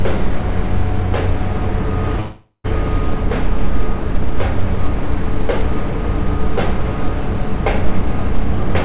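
A recording of sounds carried over a call link, its band stopping at 4 kHz as a G.711 mu-law stream would. From 2.2 to 2.66 s the sound smears into a fading buzz, then about 50 ms of silence, and resumes with that stretch missing. This is likely a long network dropout, where the receiver invents filler rather than briefly patching a single lost packet.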